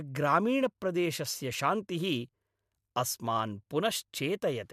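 No technical faults can be heard anywhere in the speech. Nothing in the audio points to a problem in how it was captured, processed or played back.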